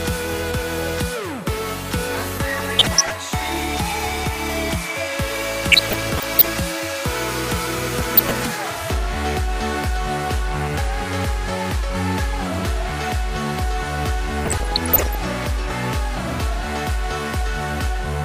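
Bursts of burbling break over the sound from 2.58 to 3.18 s, 5.72 to 6.53 s, 7.98 to 8.43 s and 14.45 to 15.15 s. This is DAB burbling: under weak reception, a bit error rate of around 0.4 to 0.7 percent lets corrupted samples and scale factors slip past error correction into the MP2 stream, so short noise blips hit single sub-bands and individual sub-bands leap in level for up to a frame at a time across each burst.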